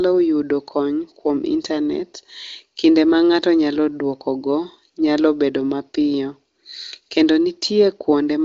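Nothing stood out on listening to this speech recording, which comes through with the wideband phone-call bandwidth of the AMR wideband (HD Voice) codec, reaching up to about 7.7 kHz.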